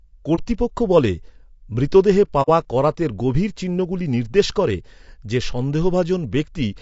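Low-delay AAC compression, from 0 s to the end: the speech is rough and grainy throughout, with a hiss-like fill between the harmonics and a thin, somewhat synthetic top band. The likely cause is AAC-ELD coding at a bitrate around 32 kbps. At that bitrate too few bits remain to keep the gaps between the harmonics clean or to reproduce the highest frequencies faithfully.

AAC frame loss with muting, at 0.35 to 0.40 s and 2.42 to 2.49 s: the speech briefly drops to silence, about 30 ms the first time and about 60 ms the second, just before "করাতের গভীর চিহ্নগুলি নির্দেশ". The decoder zeroed the spectrum of the missing frames. Because its overlapping windows fade the sound out and back in, the first gap is a brief dip and the second a soft-edged hole.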